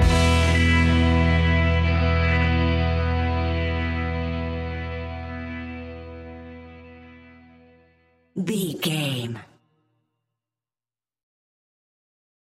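No technical faults are audible.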